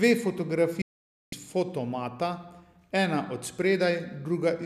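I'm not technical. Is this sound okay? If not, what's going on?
No. There is a digital broadcast dropout from 0.82 to 1.33 s, where the speech cuts to silence for about half a second. In a digital broadcast, sound arrives as a stream of small data packets. When the receiver loses the signal or gets damaged packets, it mutes rather than play garbage, then resumes once good data returns. Here the sound drops almost instantly, and whatever was said during that half second is simply gone.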